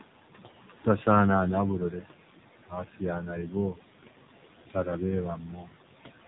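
Throughout the speech, the background noise drops away between phrases and surges back under each word. These are noise suppressor artifacts: the suppressor estimates the steady room noise, which sits about 14 dB below the speech, and pulls down any frequency band it judges to be noise, by as much as about 17 dB, recalculating every frame. The voice also sounds buzzy, hollow and synthetic, and nothing survives above 3.8 kHz. That is the AMR narrowband mobile codec at work. It rebuilds the voice from a vocal-tract model excited by a handful of pulses per subframe, and the plainly audible damage fits a low mode of roughly 7.4 kbps, with the leftover noise smeared into a swirl. The band limit is set by the codec, while the call microphone processing only trims the lowest bass, as is normal. Parts of the speech also go faint or swallowed, where the suppressor mistook them for noise and turned them down with the background. 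This speech cut by the noise suppressor is deepest from 2.67 to 3.02 s, dropping by about 17 dB over roughly a sixth of a second. It happens again from 3.46 to 3.55 s, by about 7 dB, and from 5.36 to 5.69 s, by about 11 dB across most of that stretch.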